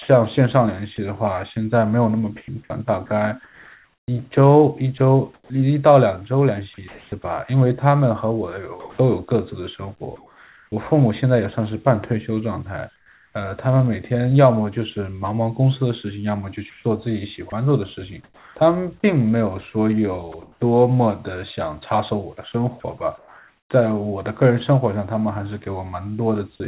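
From 0.02 to 10.72 s the speech is chopped, likely by the sender's voice detector: about 2 s in total of quiet syllables and word edges are swapped for synthetic fill, so the speech has holes. At 12.96 to 13.34 s, comfort noise replaces the background. For 0.38 s the real background, about 39 dB below the loudest speech, gives way to a steady, featureless noise about 4 dB quieter. This is likely discontinuous transmission, with the receiver generating filler during the pause. The same chopping, likely again from the voice detector, returns at 16.7 to 20.6 s, where about 0.68 s is replaced, and at 22.8 to 23.7 s, where about 0.58 s is replaced. Both stretches have the same holes in the speech. Throughout, nothing is heard above 4 kHz, which points to a narrowband 64 kbit/s telephone codec on the call path.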